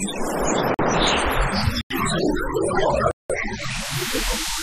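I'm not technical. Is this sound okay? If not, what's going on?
No. There are three blocks of digital silence, at 0.74 s, 1.81 s and 3.11 s, about 46, 93 and 186 ms long, each where the sound abruptly stops and restarts.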